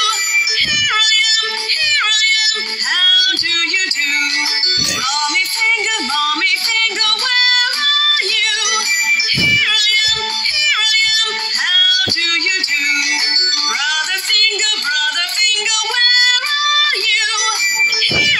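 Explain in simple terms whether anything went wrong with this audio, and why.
Regular ticks, roughly once a second from 0.41 s to 17.20 s: clock slip clicks, likely from two unsynced device clocks dropping or repeating single samples.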